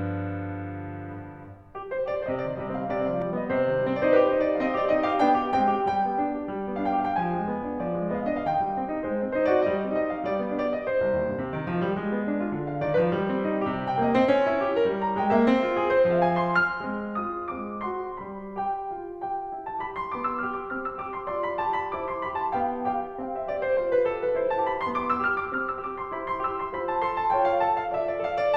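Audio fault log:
0.00–3.22 s, doubled audio track: the music is already doubled when the clip begins, with a second full-band copy trailing the original by roughly 300 ms and sitting about 5 dB lower. It is likely an edit or a second, slower capture path holding two copies out of step. Unlike an echo or reverb, the copy does not decay or repeat, carries no room colour, and drops out abruptly at 3.22 s.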